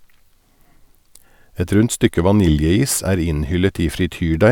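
No technical faults can be heard anywhere in the speech recording, and the signal holds steady throughout.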